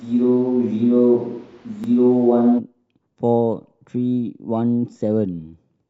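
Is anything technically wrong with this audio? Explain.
Yes. From the start to about 2.57 s the speech sounds roomy and hollow, with thin low end. This is likely a switch to a distant microphone, picking up more of the room than a close one would, though the level stays about the same and the background sits roughly 35 dB under the speech.

At 1.84 s and 3.85 s there are brief stutters, a sign of overlapping chunks. The audio was handled in 2-second blocks, each starting slightly before the previous one ended, so 12 ms repeats at each join and is heard as a click.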